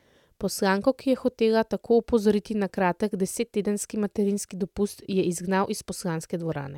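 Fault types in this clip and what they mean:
No faults turn up anywhere in this speech, so there's nothing here to list or explain.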